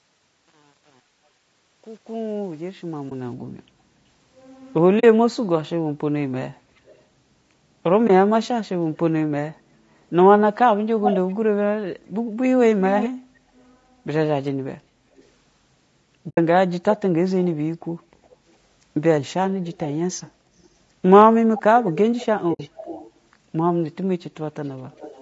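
The whole speech clip has a rough, grainy texture, with noise filling the gaps between harmonics and a thin top end. That's the sound of low-delay AAC compression, likely AAC-ELD at around 32 kbps, where short frames resolve pitch poorly and the low bitrate starves the coder of bits.

On top of that come soft-edged dropouts from AAC frame loss with muting at 3.09–3.12 s, 4.99–5.04 s, 8.07–8.10 s, 16.29–16.38 s and 22.53–22.60 s. They last 20, 40, 20, 80 and 60 ms. The decoder zeroed the missing frames, so the sound dips out and back in.

There's also an echo leak, heard as a delayed copy of the speech about 380 to 410 ms behind, with the delay creeping up over the clip. It shows up at 6.86–7.02 s, 8.44–8.97 s, 11.02–13.10 s, 15.16–15.24 s, 19.71–20.67 s, 21.58–23.11 s and from 24.64 s to the end. It's a faint scrap at about −35 dB and gets loud at 11–13 s, where it sits only about 5 dB under the speech. 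That's likely a far-end loudspeaker whose echo canceller didn't fully remove it.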